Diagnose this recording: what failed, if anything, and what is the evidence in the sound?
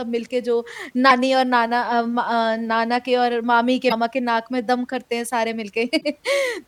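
The failure lies in the compressed stream, where damaged data in a compressed stream reaches the decoder. Speech is interrupted three times by short disruptions: 1.06–1.12 s, 3.85–3.92 s and 5.97–6.04 s, each about 55–70 ms. Corrupted bytes make the decoder misread frames and resynchronise on a later header. Each event is a codec-stage fault rather than a buffer dropout or a wiring fault.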